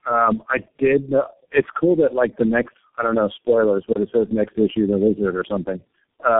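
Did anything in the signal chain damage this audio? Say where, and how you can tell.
Yes. The damage sits at the codec stage and runs through the whole clip: tandem speech coding. The speech has the compounded roughness, muffling and warble of several low-rate coders in series, fitting four speech codecs in a row ending in G.723.1, with G.711 hops between them. Each coder re-encodes the previous one's errors, so the artefacts stack. Nothing is heard above about 3.7 kHz. A single codec pass would sound cleaner, and packet loss would leave gaps rather than this constant smeared texture.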